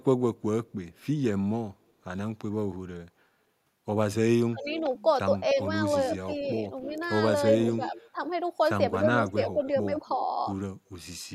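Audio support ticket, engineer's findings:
Echo leak at 0.38–1.92, 4.65–5.51, 6.81–8.1 and 9.29–10.16 s: delayed copy about 0.31 s behind, faint at first, strongest near 7 s. Likely far-end echo canceller leaving residual loudspeaker pickup.

Speech suppressed in double talk, 4.5–9.63 s: talker dips by as much as roughly 15 dB, about a second in total, while the other side speaks. Likely canceller attenuating both voices during overlap.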